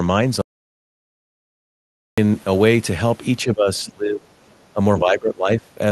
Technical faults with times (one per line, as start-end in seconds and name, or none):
0.41-2.18 audio dropout to silence
3.44-4.29 speech suppressed in double talk
4.47-4.56 other side's voice leaking through
4.74-5.77 speech suppressed in double talk